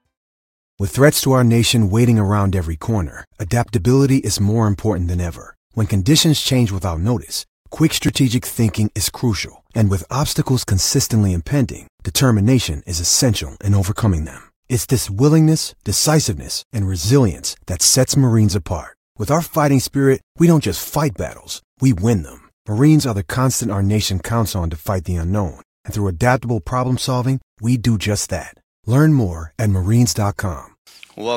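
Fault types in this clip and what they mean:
Repeated buffer: new audio did not reach the output device in time, so it replayed the block it had just sent, a piece about 10.7 ms long that fits a 512-sample buffer. Each time, that fragment sounds twice with a hard join. Because the buffer is so short, it comes across as a brief click or buzz rather than a stutter, with roughly 10 ms of audio lost. It happens at 8.08 s, after "change without notice quick", and at 13.35 s, after "consistently impending determination is".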